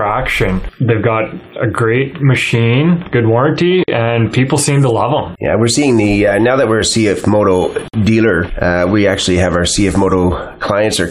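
At 3.84 s and again at 7.88 s the sound drops out for about 45 ms and 53 ms, a gap at a join of encoded pieces every 4 s. Separately encoded segments were joined with their encoder delay and end padding left in, producing brief silences with smeared edges before the sound resumes unchanged.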